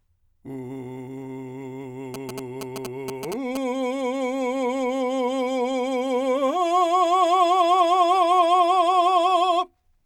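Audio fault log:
2.14–3.57 s GSM signalling bursts. A galloping dit-dit-dit of short 217 Hz buzzes sits about 10 dB below the music. A nearby 2G phone's radio bursts are rectified by the audio circuit.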